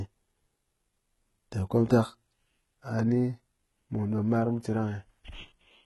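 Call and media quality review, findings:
Throughout: s sounds gritty, metallic and lispy, treble synthetic, nothing above 11.7 kHz. HE-AAC compression, heavy damage, likely cause. Upper band rebuilt by spectral band replication, so harmonics misalign at the crossover. Fits a bitrate near 16 kbps.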